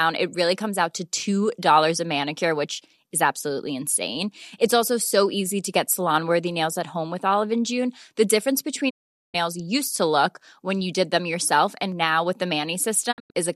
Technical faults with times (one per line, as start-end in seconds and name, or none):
8.89-9.36 digital broadcast dropout
13.11-13.37 digital broadcast dropout